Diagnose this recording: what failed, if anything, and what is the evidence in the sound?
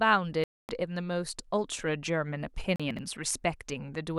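Bluetooth stall, at 0.44 to 0.69 s and again at 2.76 to 2.80 s. The speech drops to dead silence for about 251 ms the first time and 37 ms the second, then resumes with no fade on either side. This is a playback-link fault, likely a wireless receiver whose buffer emptied while interference held up packets, leaving nothing to play until the retransmitted audio arrived and output could continue.

Chunks out of order, from 2.91 to 2.99 s. Over this 80 ms stretch the speech sounds briefly scrambled. The audio was handled in 20 ms blocks at the buffer or transport stage, and one block landed three positions late, so it plays after the material that should follow it. Nothing is missing, but the reordering creates three hard discontinuities.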